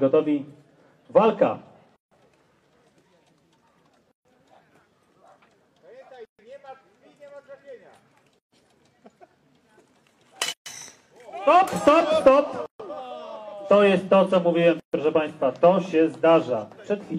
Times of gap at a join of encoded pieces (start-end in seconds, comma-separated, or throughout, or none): 1.96-2.11, 4.11-4.25, 6.25-6.39, 8.39-8.52, 10.52-10.66, 12.66-12.80, 14.80-14.93